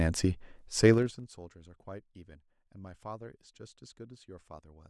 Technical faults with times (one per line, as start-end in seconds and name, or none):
0.90-1.28 zipper noise